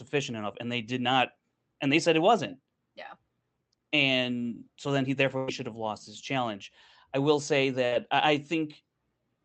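Bursts of packet loss at 5.37 to 5.49 s and at 7.85 to 7.94 s break up the speech. In each, packets arrived too late or not at all, so the receiver filled the hole by stretching the last sound and fading it out: 98 ms of fill replacing about 100 ms of speech the first time, 65 ms replacing about 60 ms the second. Speech resumes further on, with the lost stretch gone. The call path's Opus coding limits the audio to 8 kHz.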